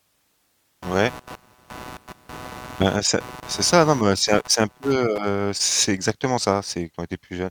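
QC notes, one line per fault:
0.82–5.18 s, computer activity noise: load swings in the host machine's processor or graphics hardware disturb the ground shared with the audio circuit, so that ground noise rides directly into the speech path. It comes through as a rough buzzing chirp pulsing at around 150 times per second, sitting roughly 20 dB under the speech, and it rises and stops with the computer's activity, paying no attention to the timing of the talker.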